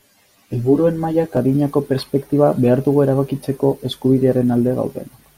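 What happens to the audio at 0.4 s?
At 0.4 s the speech is inside a stretch of channel delay (comb filtering) running from 0.0 to 1.37 s, ending just before "adinako perspektiba behar dugu". One channel lags the other by roughly 10 ms. When the two are summed to mono, cancellations fall at evenly spaced frequencies, from about 50 Hz upward, and the voice sounds hollow and phasey. A spectrogram shows fixed horizontal notch stripes.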